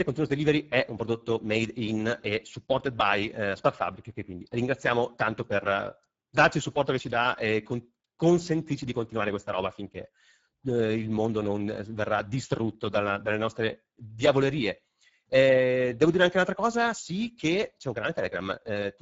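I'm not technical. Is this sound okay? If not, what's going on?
No. The speech has plainly audible Speex codec damage from start to finish. Speex is an older speech codec used in internet calls and game chat. It squeezes the voice into very little data, so fine detail gets thrown away. That makes the speech sound rough, hoarse and noisy. The sound also stops around 7.7 kHz, so the crisp top end is missing. It sounds dull, like an old online call.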